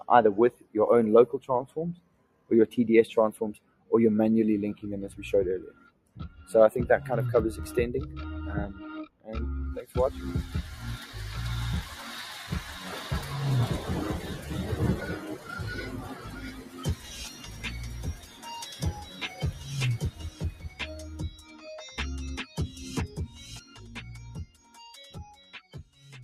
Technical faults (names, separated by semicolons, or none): noise suppressor applied to music or sounds; sound cut by the noise suppressor